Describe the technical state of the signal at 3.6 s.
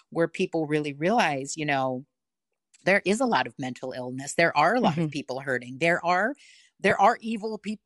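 At 3.6 s the speech carries plainly audible artefacts of what is likely Bluetooth LC3 compression, present across the whole clip rather than just at this moment. The codec cuts the signal into short transform frames, and the grain here fits 7.5 ms frames at around 48 kbps. Too few bits reach the upper spectrum, so parts of it are zeroed and refilled with noise, which gives the voice a breathy, grainy edge.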